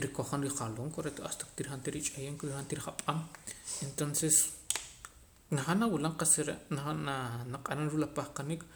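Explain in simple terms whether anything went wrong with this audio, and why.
Nothing went wrong here.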